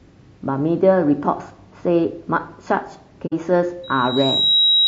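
Throughout, the speech sounds rough and grainy, with noise filling the gaps between harmonics and a thin, synthetic-sounding top band. This is most likely low-delay AAC compression (AAC-ELD), whose short frames resolve pitch harmonics poorly, and the damage fits a bitrate around 32 kbps.

From 3.26 to 3.34 s there is an AAC frame loss with muting. About 60 ms of audio, roughly two frames' worth, is gone and replaced by silence. The overlapping windows fade the sound out and back in, leaving a soft-edged gap.

At 3.83 s a loudspeaker feedback squeal begins and runs to the end of the clip. A single 3.8 kHz tone grows on its own as the microphone picks up the loudspeaker. Within about 0.7 s it swells to sit about 5 dB above the speech.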